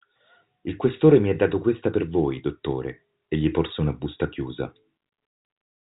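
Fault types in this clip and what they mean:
There are no fault types in this clip; the speech comes through telephone-band coding, with nothing above about 3.8 kHz.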